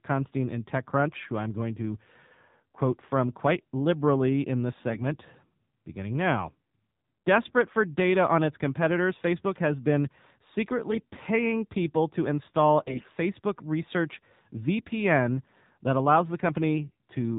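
Speech, squeezed through the AMR narrowband mobile codec for the whole clip. Nothing above 4 kHz survives, so the voice sounds thin and boxed in. The codec damage is plainly audible. The voice has a buzzy, synthetic edge, as if rebuilt from a crude vocal-tract model and a few pulses. That fits a low AMR-NB mode of about 7.4 kbps. At that rate the pulse excitation is too sparse to carry natural texture. AMR bit errors break in three times: 4.90 to 5.02 s, 10.88 to 11.21 s, and 12.82 to 13.10 s. In each burst the voice keeps roughly its pitch and loudness. It turns hoarse, scratchy and gargly. The last burst is the harshest. This points to a weak radio link flipping the less protected bits in a run of frames. The checksum still passed, so the decoder played the corrupted frames. Their pulses landed in the wrong places, and the gain and spectral details came out wrong.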